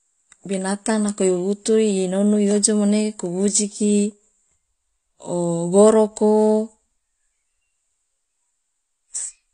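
From start to finish the speech sounds dull and smeared, with nothing above 9.7 kHz, and sibilants and sustained sounds carry a warbling, fizzy texture. This is likely AAC compression at a low bitrate, consistent with AAC-LC at around 32 kbps. At that rate the encoder pulls its cut-off down and quantises each frame's frequency lines coarsely against a hearing model. That leaves gaps or noise-filled bands in the spectrum that shift from frame to frame.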